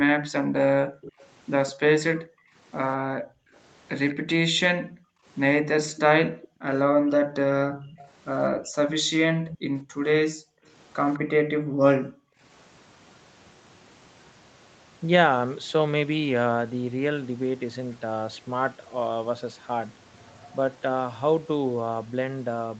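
From the start to about 12.41 s, the background is gated by the echo canceller. Whenever the far-end loudspeaker plays, the canceller clamps the microphone down, by up to about 40 dB, so the room tone dips or vanishes for a total of roughly five seconds before springing back.

On top of that there's an echo leak, likely from a loudspeaker whose canceller didn't fully remove what its mic caught. A copy trails the speech by 205 ms at 1.01 to 1.72 s, 3.55 to 4.15 s, 5.91 to 9.58 s (the loudest stretch, around 15 dB down), and a tiny blip at 11.14 s, each time faint behind the speech.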